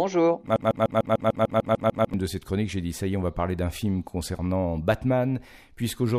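From 0.56 to 2.14 s there is a broken-record loop, most likely because the player, encoder or stream stalled and kept re-sending the last fragment it held in its buffer. What you hear is a single slice of the speech, about 0.15 s long, repeated identically eleven times back to back, a rapid mechanical stutter. Whatever was said during those 1.6 seconds is gone, and normal playback resumes on "de cette chronique j'ai".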